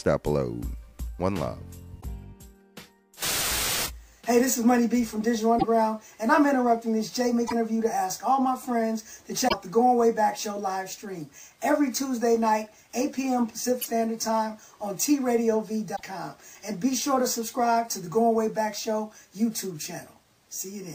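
Brief glitches at 2.00, 5.58, 7.46, 9.47, 13.81 and 15.95 s, each 40 to 70 ms (MP3 frames are 26.1 ms), are likely a broken MP3 bit reservoir: the sound skips ahead and the frames after each cut decode from the wrong data. On a spectrogram each is a narrow vertical smear or gap, with an abrupt discontinuity in the waveform.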